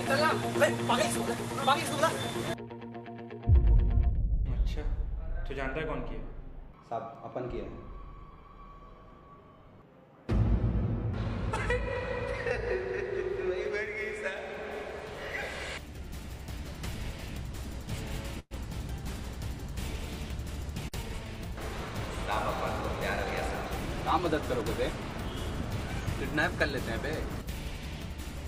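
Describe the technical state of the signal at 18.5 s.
At 18.5 s the signal is inside a call audio freeze running from 18.39 to 18.54 s. The last sound is stretched into a fading buzz or hiss that drops to roughly 40 ms of silence, about 114 ms of fill in all, before the audio resumes where it stopped. Nothing is lost; the rest of the clip simply arrives 114 ms later. This is likely a jitter buffer running dry while packets were delayed. On a spectrogram it shows as smeared, repeating bands thinning into a blank column. On the waveform it appears as a decaying envelope falling to a flat line.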